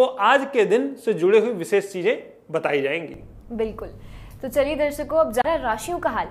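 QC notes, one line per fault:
5.42 to 5.44 s, CD skip: there's a quick tick and a brief dropout of roughly 30 ms, then the audio carries on from a different spot. A knock or a flaw on the disc made the laser jump to another turn of the spiral.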